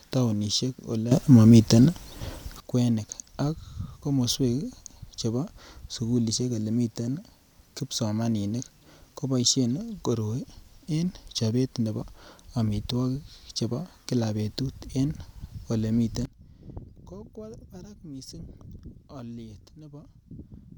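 At 1.12 s the speech and its background noise leap up by about 13 dB together until 2.60 s, then from 16.25 s drop by about 19 dB to the end: sudden gain jumps, likely from gain changes applied with no ramp.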